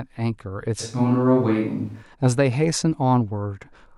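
From 0.82 to 2.01 s the speech jumps abruptly to a roomy, hollow, thinner sound, then snaps back. That's a switch to a distant microphone, likely because the close mic dropped out. Level barely changes, and room noise stays well below the speech.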